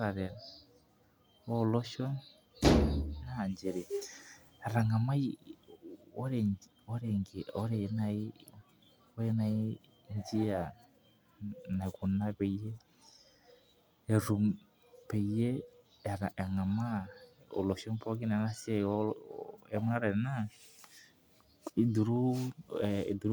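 No technical faults are audible anywhere in the speech recording.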